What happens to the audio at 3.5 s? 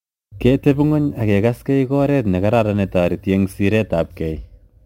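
At 3.5 s the speech has crude rate conversion running right through, with 48 kHz to 44.1 kHz done by dropping and repeating samples unfiltered, leaving a faint gritty, inharmonic fizz under louder, brighter sounds.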